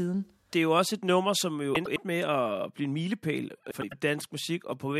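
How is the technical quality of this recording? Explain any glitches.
The speech has two glitches, both frames out of order. Around 1.75 to 1.98 s, after "et nummer som jo" and before "med at blive en", and again around 3.71 to 3.94 s, after "at blive en milepæl", two adjacent blocks of about 105 ms each were decoded in swapped order, consistent with runs of four frames. Each stretch plays with its halves exchanged, giving a garbled flutter, though no time goes missing.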